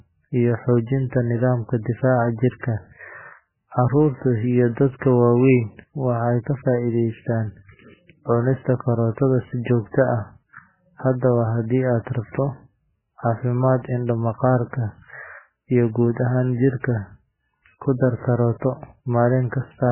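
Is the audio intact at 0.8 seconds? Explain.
No, at 0.8 s you're hearing heavy MP3 compression damage that runs through the whole clip. Nothing survives above 3 kHz, and the speech sounds watery and swirly as weak frequency lines flicker between frames. It's likely a very low bitrate, around 8 kbps.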